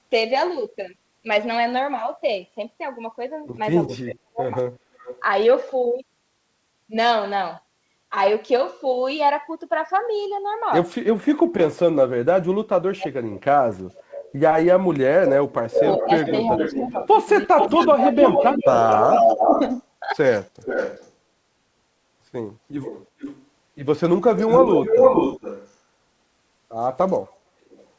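From 3.96 to 5.22 s there is an echo leak: a delayed copy of the speech trails it by 340 ms at about 20 dB below. This is most likely a far-end loudspeaker echo that the canceller did not fully remove. It returns at 11.36–11.42 s (about 35 dB down), at 13.31–14.32 s (about 20 dB down), at 15.97–21.12 s and 22.81–25.73 s (as loud as the speech itself), and at 27.70–27.87 s (about 35 dB down). The lag grows from 368 to 436 ms. Unlike suppression, this adds a second, later layer of sound rather than removing any.

Speech suppressed in double talk occurs at 4.02–4.50 s, with dips of around 35 dB. It occurs again in scattered bursts between 11.17 and 19.5 s, about four seconds in total, with drops of around 40 dB. The canceller likely clamped both talkers during overlap. The voice sinks or drops out in pieces instead of being doubled.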